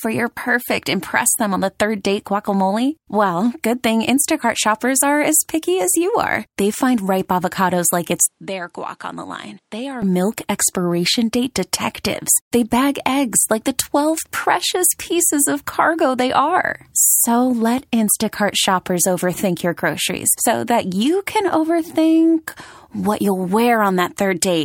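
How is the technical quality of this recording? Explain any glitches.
The recording has one clear glitch. An input switch to a poorer device occurs from 8.26 to 10.02 s, between "find ripe avocados like" and "milk expiration date detectives". The input likely changed to another microphone, which cuts everything above 11.4 kHz and drops the level by about 10 dB. The sound turns duller and quieter, with faint new background noise and no gap at the switch.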